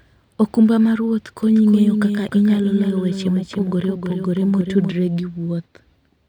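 A doubled audio track runs from 1.43 s to 4.95 s. A second full-band copy of the speech trails around 300 ms behind, roughly 5 dB quieter, without decay or room colour, and cuts in and out abruptly, likely from a slower second capture path.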